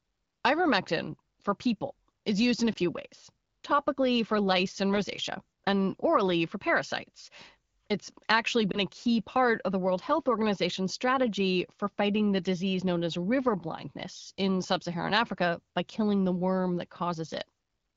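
A speech recording coded with AMR wideband (HD Voice), whose clear quality points to one of the higher modes, has two lost AMR speech frames. At 2.73 to 2.78 s, between "is used in a" and "ways topically for lice", and at 8.71 to 8.79 s, just before "a key part of", the sound briefly dips or warbles. Each gap fits a single 20 ms frame failing its checksum, with the decoder bridging it from the previous frame's pitch and vocal tract settings at reduced gain.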